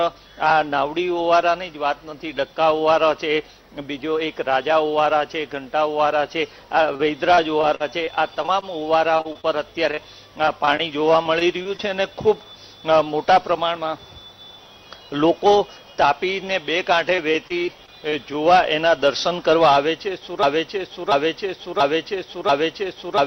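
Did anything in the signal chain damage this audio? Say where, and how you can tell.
Yes. From 6.93 to 11.81 s the audio turns choppy, with small pieces dropping out. There are 23 short holes, the longest about 48 ms, and together they cover roughly a tenth of that stretch. A shorter burst from 17.16 to 18.14 s has 7 holes, the longest 25 ms. This is repeated packet loss at the network stage: packets arrived late or not at all, and the receiver smeared the last sound across each gap, which produces the robotic texture.

From 20.43 s to the end, a 0.69 s fragment plays back to back four times, the same each pass, like a broken-record loop. The audio that should have followed never arrives. The exact repetition points to a stall upstream, likely in the stream or player buffer. The playback stage kept sending the last chunk it held instead of new audio, and the stall never cleared before the clip ended.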